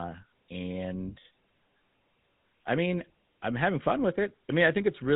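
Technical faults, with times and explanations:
Throughout, GSM full-rate codec: the speech has a buzzy, gravelly roughness from a vocal-tract model driven by regularly spaced pulses, with the excitation coarsely subsampled. This fits roughly 13 kbps. A spectrogram shows nothing above 4 kHz and a smeared, pulse-streaked harmonic structure below it.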